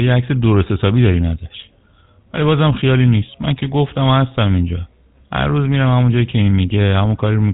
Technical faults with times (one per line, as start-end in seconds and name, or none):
0.00-7.54 GSM full-rate codec